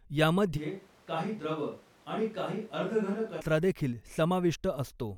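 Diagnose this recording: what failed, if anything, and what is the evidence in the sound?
Capture stage, a likely switch to a distant microphone: from 0.59 to 3.39 s the speech turns abruptly roomy and thin, about 5 dB quieter, with background noise roughly 30 dB below it. Unlike added reverb, the level and noise change too.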